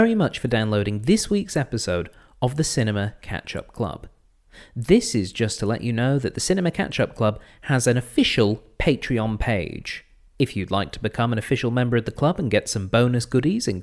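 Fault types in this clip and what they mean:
No technical fault can be heard anywhere in the recording. There is nothing here to list.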